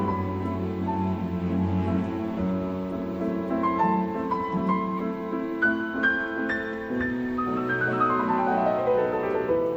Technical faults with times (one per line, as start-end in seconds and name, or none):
4.97-5.00 corrupt frame decoded